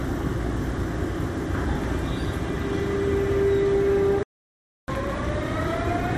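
At 4.23 s there is a playback stall, likely from the player running out of buffered data or its output thread being blocked. The sound drops to silence mid-flow for about 0.65 s, then resumes at 4.88 s.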